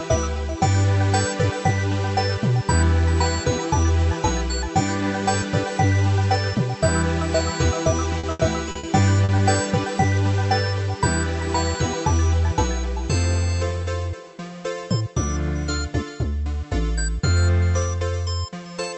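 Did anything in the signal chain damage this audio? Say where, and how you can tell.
Yes, the network leg of the call did it. From 8.19 to 8.86 s there's a burst of repeated packet loss, and you get that choppy sound with pieces missing. It's four separate holes, the longest around 80 ms, and about a third of that stretch is concealment rather than real audio. The decoder keeps extending the last bit of sound to bridge each gap, but the next drop arrives before it properly recovers.

Then, just after, at 9.25 to 9.32 s, there's a single short concealed packet loss of about 40 ms. It's a brief smear where the receiver filled the hole by carrying the previous sound forward, pitched if voiced or as shaped noise if not, and then crossfaded back into the real stream. It's the same network cause, just one isolated drop this time, riding on top of the Opus call path's band limit at about 8 kHz.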